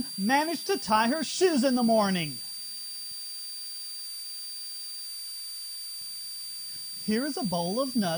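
A switching supply whistle runs throughout, a high tone wandering between 4.66 and 4.71 kHz about 10 dB below the sound; its drifting pitch separates it from steady mains hum.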